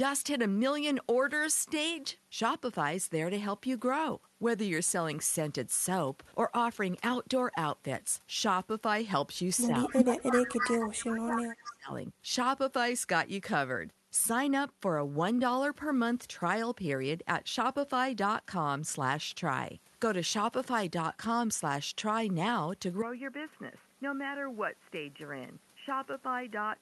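From 9.66 to 11.91 s the speech dips and breaks up, falling by as much as about 25 dB, with roughly two seconds affected in all. This is speech suppressed in double talk, likely because an echo canceller faced with both sides talking at once turned everything down. Unlike a network dropout, the sound is not replaced by silence or glitchy concealment. It is ducked and thinned, and it recovers in pieces.

Overlapping that stretch is an echo leak, a delayed copy of the voice trailing 243 ms behind it. It runs from 9.84 to 11.05 s, returns briefly at 11.35 s, and again from 11.67 to 11.74 s. The first two parts sit only about 5 dB under the speech, and the last about 15 dB under. The likely cause is a loudspeaker on one side whose echo canceller let part of its microphone pickup through. A fixed lag like this sounds like a distinct repeat, which sets it apart from room reverberation.

At 23.02 s, through to the end, the input switched to a poorer device. 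Before the switch, the sound extends up to about 12 kHz through the Opus call path. After it, the band is narrower. The level drops by about 5 dB, and a new noise floor about 35 dB below the speech appears, with no gap at the changeover. This is likely a move to another microphone or a headset's call profile. A codec bitrate drop would not bring its own noise bed and tone like this.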